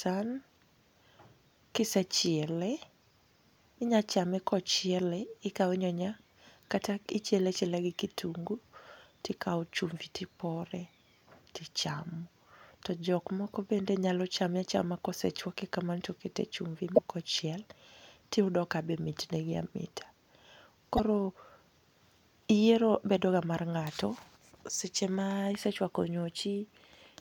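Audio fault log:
16.92–16.99 s and 20.94–21.00 s, damaged data in a compressed stream: corrupted bytes in the compressed speech stream cause the decoder to misread the affected frames, lose sync and hunt for the next valid frame header. Each event is a short chirp or squawk of roughly 60 to 70 ms. The first comes just after "kamano to okete chumbi" and before "ok ochiel", and the second follows about four seconds later.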